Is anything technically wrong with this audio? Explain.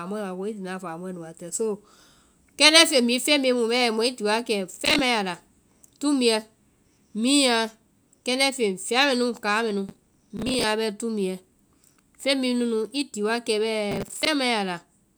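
Yes. Processor overload crackle sounds at 4.76–4.99 s before "a la", 9.89–10.64 s between "fɛa mɛnu káa mɛnu" and "bɛ tumbuɛ", and 13.91–14.27 s. Roughly 10 ms buffers miss their deadlines in runs, replaying stale audio as gritty tearing.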